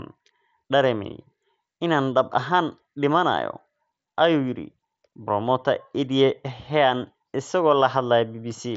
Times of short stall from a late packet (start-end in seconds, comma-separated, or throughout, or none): none